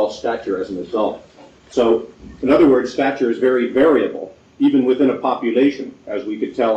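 At 1.69 s there's a brief glitch lasting to about 1.74 s, roughly 60 ms, where the audio skips forward and the next moment comes out garbled. The likely cause is a broken MP3 bit reservoir. Frames seem to have been dropped, so the frames after the gap reach back for borrowed data and pick up bytes from the wrong frame instead. The damage spans about two frames, which fits a frame length near 26 ms.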